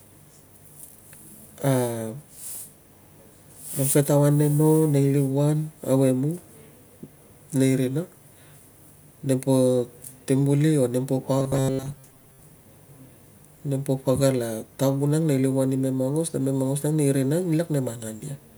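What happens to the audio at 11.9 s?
At 11.9 s the speech is in the middle of robotic sound from repeated short buffers, running from 11.39 to 12.41 s. New audio is likely arriving too seldom, so playback fills the gaps by looping a fragment of roughly 7.5 ms while the real signal is skipped for most of that second. The loop imposes a steady 133 Hz buzz, turning the voice into a rigid, metallic drone that only loosely tracks the speech.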